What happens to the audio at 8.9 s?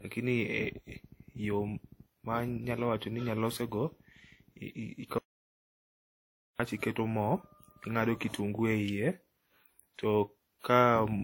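A sharp snap lands at 8.88 s, an electrical switching spike, likely a nearby switch or discharge arcing into the line. It sits on top of the speech rather than cutting it out, which separates it from a dropout. Underneath, the speech carries mixed compression artefacts with nothing above 16.6 kHz, likely the mark of transcoding between lossy codecs, where each pass adds its own damage to the last.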